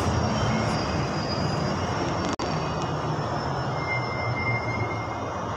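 At 2.35 s there's a gap at a join of encoded pieces: the audio drops out for about 47 ms, until 2.39 s, then picks up where it left off. Two separately encoded chunks were butted together with the encoder's start delay and end padding left in, so that silence sits right at the seam, its edges smeared.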